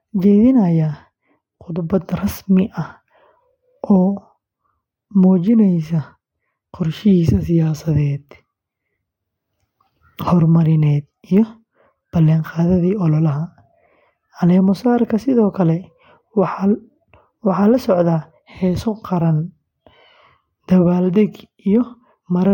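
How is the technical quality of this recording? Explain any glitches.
No glitches are audible anywhere in the speech recording, so there is nothing to explain.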